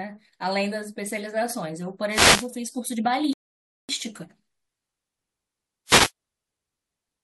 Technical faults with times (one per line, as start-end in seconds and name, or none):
2.09-2.49 wireless microphone noise hit
3.33-3.89 rebuffering stall
5.86-6.11 wireless microphone noise hit